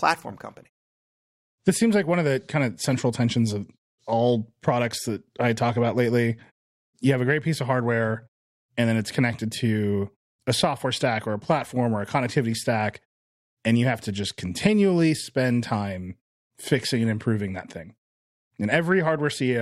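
No technical faults are audible in this speech.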